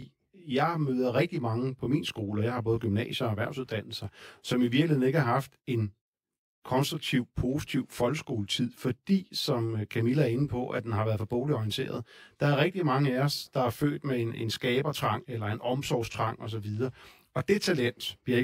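From start to finish, the speech carries channel delay (comb filtering). One channel lags the other by roughly 20 ms, and when the two are summed to mono, content common to both cancels at regularly spaced frequencies. The first notch falls near 30 Hz, with further notches repeating at close, even intervals up the spectrum. The voice sounds rough and slightly doubled.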